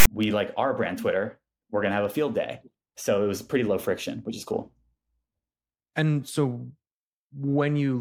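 At the very start of the speech, from 0.00 to 0.07 s, there is a short case of file tags played as audio. A block of text metadata has been decoded as if it were sample data, so the character bytes come out as a loud, harsh rasp sitting off-centre rather than around zero. The zero padding that follows plays as flat silence. The whole 65 ms burst has hard edges and ends just before "we like our brand".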